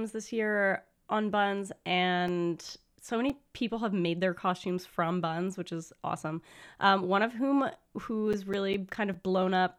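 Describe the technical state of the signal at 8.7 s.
At 8.7 s the speech is broken by a run of seven regular ticks and tiny dropouts, from 8.13 to 9.34 s, just after "of whom", the longest around 10 ms. These are CD scratch ticks: a disc blemish corrupted data beyond error correction on each rotation, so the player interpolated or muted those samples.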